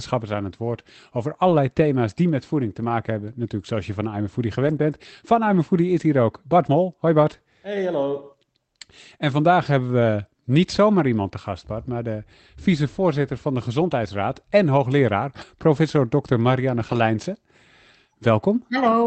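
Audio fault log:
1.47–1.53, 2.85–2.91, 4.63–4.77, 9.99–10.01, 14.55–14.57, 15.41–15.43 and 16.75–16.97 s: lost packet rebuilt from error correction. Each stretch, from 20 to 120 ms long, was filled from the low-bitrate copy carried in the following packet, so the sound continues without a gap but turns briefly grainy and noisy. The waveform shows no dropout. On a spectrogram, harmonics blur into noisier patches, all under the call path's 8 kHz ceiling.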